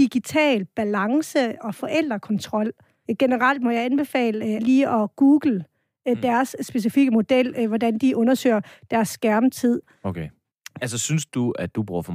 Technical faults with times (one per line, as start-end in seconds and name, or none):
none